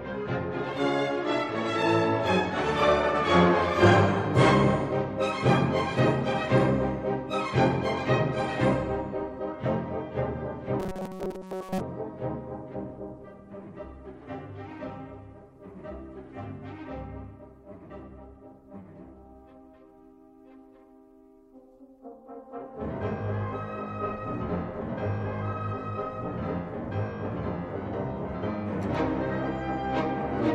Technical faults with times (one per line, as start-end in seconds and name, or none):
10.80-11.80 robotic sound from repeated short buffers